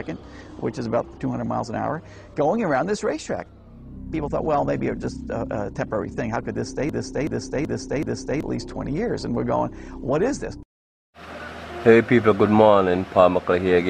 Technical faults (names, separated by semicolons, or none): broken-record loop